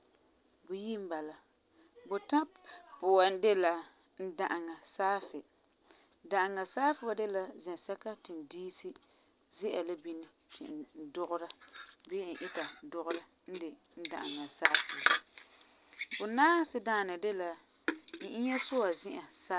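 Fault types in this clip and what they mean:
No audible technical faults are present in this speech recording.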